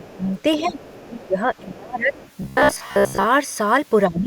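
From 0.0 to 0.32 s, at 0.58 to 0.79 s, from 1.05 to 2.13 s and from 4.08 s to the end, the speech is suppressed in double talk. The talker's level dips by about 15 to 25 dB in uneven pieces, likely because an echo canceller turned everything down while both sides spoke. Unlike a simple level drop, the dips follow the other talker's activity.

Alongside these dips, the other side's voice leaks through at 0.0 to 0.1 s, 0.37 to 0.42 s, 0.64 to 1.28 s and 2.13 to 2.31 s. It is a faint second voice, about 20 to 30 dB below the speech. The likely cause is loudspeaker pickup that the echo canceller did not fully remove.

From 2.42 to 3.27 s there is robotic sound from repeated short buffers. A rigid metallic buzz at 66.8 Hz replaces most of the speech, likely because a roughly 15 ms buffer was looped while new audio was skipped. Unlike the leak, this is the talker's own sound, with a fixed-rate buzz imposed on it.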